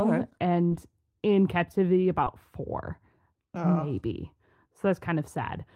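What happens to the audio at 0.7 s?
At about 0.67 to 0.73 s, a short concealed packet loss occurs: roughly 40 ms of the speech stream arrived too late for the decoder, and the receiver papered over about 35 ms of that gap by extending the preceding sound, then crossfading back into the real signal. The result is a brief smeared, wobbly patch just before "in captivity", where a moment of the speech is synthetic rather than what was actually said.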